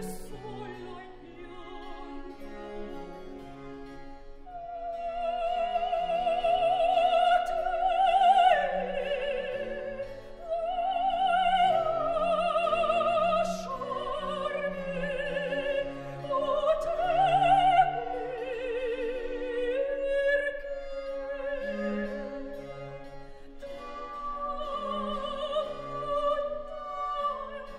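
No technical faults can be heard anywhere in the recording; the signal stays continuous and steady throughout.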